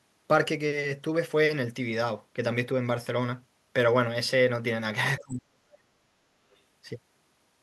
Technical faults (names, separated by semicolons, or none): speech suppressed in double talk; other side's voice leaking through